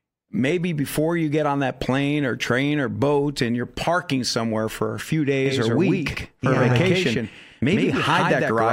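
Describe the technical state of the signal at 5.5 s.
At 5.5 s a doubled audio track has just begun: from 5.46 s, right after "somewhere for a few", to the end, a full-band copy of the speech trails about a tenth of a second behind, a few dB quieter. It was likely captured twice by a slower path. Unlike an echo, it switches on abruptly, with no decay or room colour.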